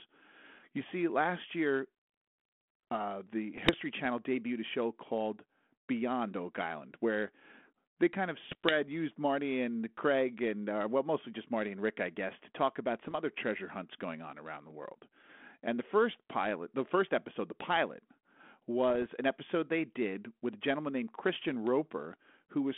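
Bit errors on an ADPCM link hit at 3.54–3.75, 8.44–8.76, 13.01–13.16, 18.90–19.06 and 21.35–21.42 s. The flipped bits, at an error rate well under one percent, knock the decoder's step size and prediction off track, so the speech breaks into pops and rough, level-jumping bursts over the band-limited 32 kbit/s G.726 telephone sound.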